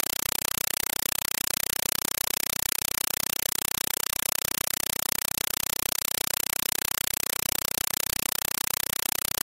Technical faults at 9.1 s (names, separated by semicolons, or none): compressed stream played as audio